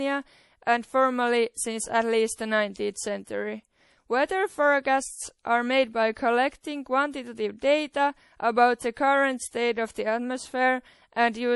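MP3 compression artefacts run through the whole clip. Nothing in the speech reaches above 11.5 kHz, where the treble stops at a hard ceiling, and the damage is plainly audible as a watery, swirling texture with metallic chirps on s sounds and smeared attacks. The likely cause is an MP3 encoder starved of bits, consistent with roughly 48 kbps. It cut the high band outright and dropped weaker frequency lines that flicker between frames.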